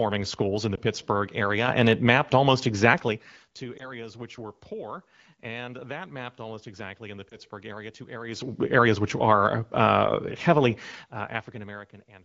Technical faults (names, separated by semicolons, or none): lost AMR speech frames; microphone volume stepped up